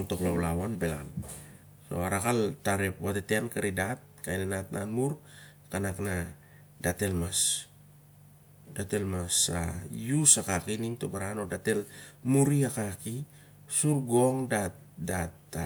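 Speech recording, no technical faults detected anywhere in the clip.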